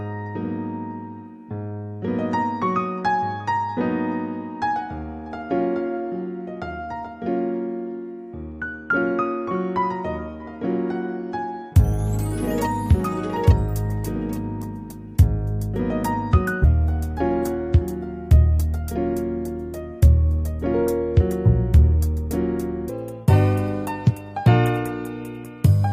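At 16.63 s the audio jumps forward with a small blip: a stream segment skipped, most likely because one segment of a segmented stream failed to load and the player moved straight on to the next. Unlike a dropout, there is no gap of silence or muffled sound. The sound simply carries on from a later point, and what comes before and after the blip does not join up. From 22.89 s to the end, a section at the wrong speed plays 1.45 times faster than normal, so everything rises by about seven semitones and sounds higher and more hurried. The likely cause is a player or editor running that part against the wrong clock. Tempo and pitch change together here, which separates this from a pitch-shift effect, where the pitch moves but the timing stays the same.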